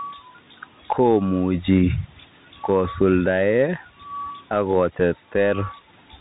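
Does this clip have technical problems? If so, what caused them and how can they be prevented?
Yes. A Bluetooth CVSD headset codec runs through the whole speech clip. Nothing above about 3.8 kHz survives, the s sounds are scratchy, and a grainy hiss sits underneath, which fits a 64 kbps CVSD link whose one-bit steps can't keep up with fast changes. To prevent it, record on the headset's high-quality media profile or a wired mic instead of the hands-free call mode.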